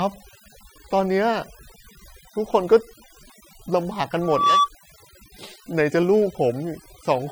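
Overdone noise removal runs throughout. The suppressor cuts bands near its noise estimate too hard. Pauses drop and break up into twinkling specks.

From 4.22 to 4.70 s, a loudspeaker feedback squeal appears. The microphone-speaker loop exceeds unity gain at 1.2 kHz. The tone swells over about a third of a second, reaching about 5 dB above the speech.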